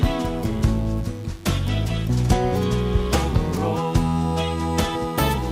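A mains buzz runs throughout. Sharp 50 Hz switching spikes leak in, stacking harmonics into a steady, raspy buzz about 30 dB below the sound.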